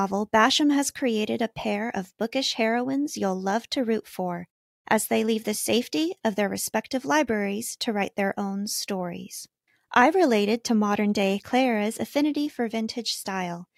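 Nothing in the speech stood out as a technical fault on listening.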